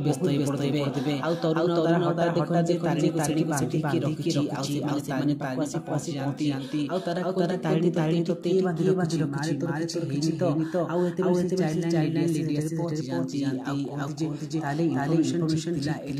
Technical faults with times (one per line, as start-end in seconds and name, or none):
0.00-16.19 doubled audio track